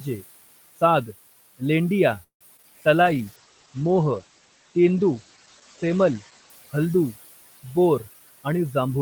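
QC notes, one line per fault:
Throughout: noise suppressor artifacts. The room noise sits about 17 dB below the speech and is pumped down by about 16 dB in the pauses, then swells back under each phrase as the suppressor opens. This differs from the bitrate drop because the change follows the rhythm of the speech, sinking in gaps and rising with talk, and is not a band-limited dulling.
2.23 to 2.43 s: call audio freeze. The last sound is stretched into a fading buzz for a short while, then about 110 ms of near silence follows before the speech picks up exactly where it stopped. About 173 ms is inserted and nothing is lost, which points to a likely packet delay that drained the jitter buffer. Unlike a dropout or skip, the continuity holds across the gap, and the rest of the clip is pushed that much later.
2.57 s: short concealed packet loss. About 20 ms of audio never arrived and roughly 15 ms of synthesized continuation bridges the hole, heard as a brief smear or wobble blended back into the real signal. 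It is much shorter than the freeze just before it and has no audible silence, so it reads as a momentary wobble rather than a halt.
2.62 to 2.65 s: skip ahead. Playback jumps forward, with roughly 70 ms of audio gone and only a sliver of fill at the seam, so the two sides butt together almost directly. This trims about 50 ms of the delay built up by the freeze. Unlike concealed loss, almost nothing is smoothed over. About 70 ms of audio simply disappears and the join sounds abrupt.
2.96 to 3.32 s: jitter buffer slow-down. The buffer rebuilds its reserve by repeating single pitch periods, adding about 49 ms and running the speech at about 89 % speed with the pitch unchanged. Vowels sound drawn out. Because the pitch holds steady, this is not a tape-style slowdown, and unlike the freeze it stretches the sound evenly and never stalls it.
3.03 to 7.58 s: call bitrate drop. The encoder falls from 32 to 12 kbps and stays at the bottom for about 3.2 s, coding more coarsely and cutting the audio bandwidth from 20 kHz to 8 kHz. 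The speech turns muffled and rough, with the sibilant sparkle gone. Unlike the suppressor's pumping, this dulling is constant across speech and pauses and lifts only when the rate recovers.
8.13 to 8.96 s: jitter buffer speed-up. The buffer holds surplus audio and sheds roughly 100 ms by cutting out short runs of pitch periods, so the speech plays at about 113 % speed at the same pitch and sounds hurried. This mirrors the earlier slow-down. Unlike the skip ahead, the removal is spread thinly over the whole stretch, with no single audible jump.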